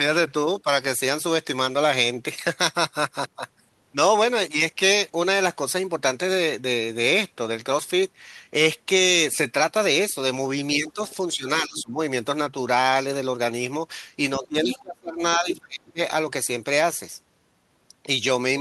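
Speech in which the talker's level sinks at 10.79–10.99 s, 11.36–11.98 s and 14.37–15.99 s. The last dip is the deepest, at roughly 30 dB. This is speech suppressed in double talk, likely an echo canceller turning everything down while both sides spoke. Unlike a network dropout, each dip coincides with a second, fainter voice. That is the other side's voice leaking through at 10.88–11.11 s, 11.76–11.82 s, 14.43–14.79 s and 15.55–15.60 s, likely loudspeaker sound the canceller left in the microphone. It is the other side's voice rather than a delayed copy of the talker, and is loudest near 14.4 s, only about 10 dB under the speech.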